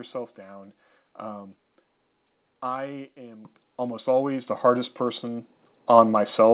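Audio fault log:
3.45, 4.47 and 5.49 s: microphone volume stepped up. Voice and background jump louder together, by about 9, 6 and 3 dB, as software raised input gain.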